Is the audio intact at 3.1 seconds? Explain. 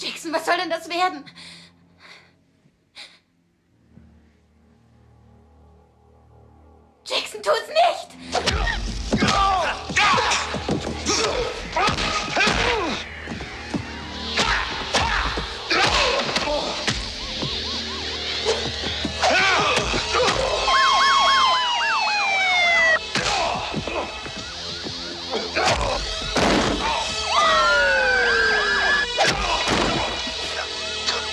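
Yes, the audio plays through 3.1 seconds without any dropout, click, distortion or other fault.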